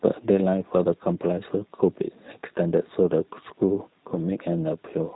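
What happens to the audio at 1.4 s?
At 1.4 s, as across the whole clip, the speech sounds rough, synthetic and dull, with nothing above 3.8 kHz: G.729 codec damage, rebuilt from filter-and-pulse models at a rate that fits 8 kbit/s.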